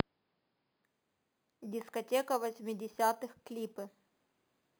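From 0.84 s, imaging from sample-and-hold upsampling: unfiltered sample repetition from 11 kHz mirrors the spectrum into 5.5–11 kHz, about 18 dB down, heard as metallic fizz tracking the speech.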